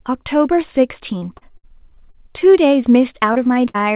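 From 1.18 to 2.52 s the speech breaks up with repeated packet loss, and you get that robotic sound. There are eight separate gaps, the longest about 58 ms, and together they cover roughly a fifth of the stretch. Each time the receiver patches the hole by stretching out whatever sound came just before. The next dropout follows before the speech has really settled, so the passage comes across as choppy, with small pieces missing.

At 3.33 s there's a short concealed packet loss. About 20 ms never arrived, and the receiver papered over it by carrying the preceding sound forward before easing back into the real signal. It's quick enough that you mostly hear a brief smear or wobble rather than a hole.

Then a second short concealed loss starts at 3.65 s and runs to 3.78 s. Sitting inside it, from 3.68 to 3.76 s, is a burst of packet loss about 60 ms long. Several packets in a row went missing, and the receiver held the last sound while letting it fade. 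So there's a brief held, decaying patch, and the speech picks up further along with that slice gone. The concealment also seems to have stretched things by a hair, around 10 ms.

Throughout, the call path cuts everything above 4 kHz, which fits a narrowband G.711 mu-law link.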